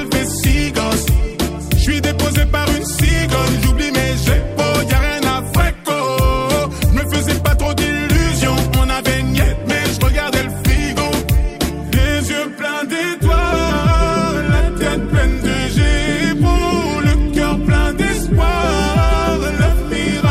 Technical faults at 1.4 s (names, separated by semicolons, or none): none